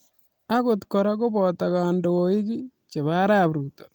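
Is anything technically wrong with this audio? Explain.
No, nothing technical stands out here, just speech with no faults to point to.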